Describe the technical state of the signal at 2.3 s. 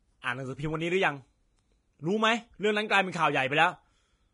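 Vorbis compression at 2.3 s, as throughout the clip: nothing remains above 10.6 kHz, and the speech sounds hissy and grainy, likely from coarse low-bitrate quantisation turning treble detail into noise.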